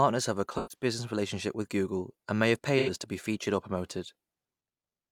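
At 0.57 s the speech turns smeared and noisy until about 0.84 s. This is AAC frame loss with concealment. About 128 ms of coded audio went missing, which fits three lost frames. The decoder rebuilt the gap from the last good spectrum, so the sound blurs into a phasey wash. At 2.78 s it happens again, up to 2.90 s. This loss is about 85 ms, which points to two frames. It sounds the same, only shorter.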